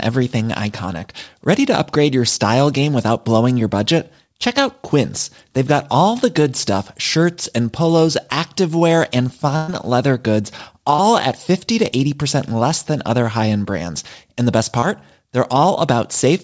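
At 9.56 to 9.70 s there is a burst of packet loss. About 120 ms of the speech never arrived in time, and the receiver covered the whole gap by extending the last received sound and fading it down, so the dropout never goes silent. It comes across as a held, dimming buzz or hiss lasting roughly a tenth of a second. The speech then picks up further along, with that stretch missing outright.

Short concealed packet loss follows at 10.96 to 11.00 s and again at 14.80 to 14.84 s. In each case about 20 ms went missing, and the decoder synthesized roughly 22 ms of continuation before blending back into the real signal. Each is a brief smear or wobble where a small piece of the speech is replaced. The band stops at 8 kHz throughout, as expected from the G.722 call path, which fits its 64 kbps mode.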